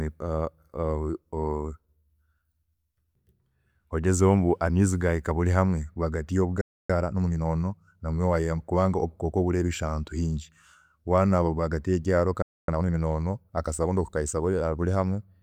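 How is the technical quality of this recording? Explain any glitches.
The speech is interrupted twice by playback problems. Each gap is followed by hurried audio.

There is a playback stall at 6.61 to 6.90 s, lasting about 0.28 s, and another at 12.42 to 12.68 s, lasting about 0.26 s. The speech simply cuts to silence mid-flow, then resumes. The likely cause is the player running short of data or its thread being blocked.

Time-compressed catch-up follows each stall, at 6.90 to 7.46 s and 12.68 to 12.92 s. The player clears its backlog by cutting out small pieces and cross-fading the joins. The speech runs at 1.5 times speed, then 2 times, with normal pitch.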